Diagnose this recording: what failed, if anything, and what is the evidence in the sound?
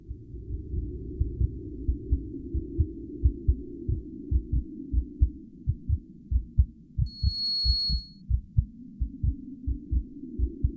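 Skip ahead at 3.95 s: about a fifth of a second of audio was dropped, and playback jumps forward with no fill, the two sides butted together.

Jitter buffer speed-up from 4.03 to 5.01 s: the buffer sat too full, so it trimmed pitch-period slices, about 100 ms in total, and the audio runs 108% fast at unchanged pitch.

Loudspeaker feedback squeal from 7.06 to 8.22 s: an acoustic loop at the capture end, where the mic picked up its own speaker. A 4.3 kHz tone swells over roughly 0.4 s to sit a few dB above the audio.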